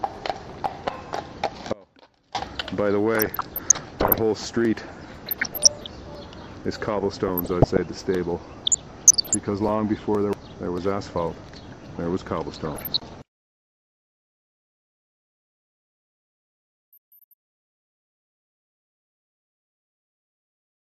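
From 1.73 to 2.35 s the audio drops abruptly to a faint residue about 25 dB down, likely a brief path break; the waveform shows a sharp-edged, near-flat notch.

DAB burbling occurs at 3.17–4.16, 5.26–5.91, 6.97–7.82, 8.63–9.35 and 12.54–13.21 s. Uncorrected bit errors in the MP2 data put short blips of noise into single sub-bands, which appear as scattered, blocky bright patches on the spectrogram.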